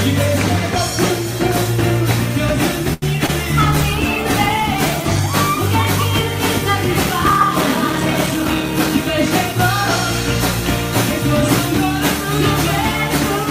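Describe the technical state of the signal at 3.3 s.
From 3.26 to 3.30 s, short concealed packet loss: about 20 ms never arrived and was filled by extending the preceding sound, leaving a brief smear rather than a silent dropout.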